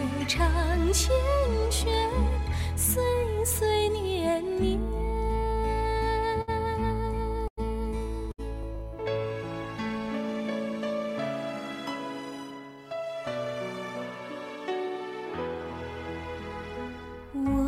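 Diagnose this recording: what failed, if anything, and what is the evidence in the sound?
Three brief hitches land at 6.41 to 6.50 s, 7.48 to 7.59 s and 8.31 to 8.40 s, where the sound hangs on one spot for 63, 98 and 70 ms with a slight buzz or dip before carrying on. These are short stalls from a late packet, in the network and jitter-buffer stage. Each time a packet missed its playout slot, the buffer ran dry and the receiver stretched the last audio until the packet arrived. Nothing is lost, and each stall adds its own length to the delay.

From 12.30 to 12.61 s the sound runs rushed at unchanged pitch, about 118% of normal speed. This is a jitter buffer speed-up in the same receive buffer. Having built up extra delay, the buffer trimmed it by cutting a series of pitch-period-sized slices, around 70 ms in all. That packs the material closer together without shifting its pitch.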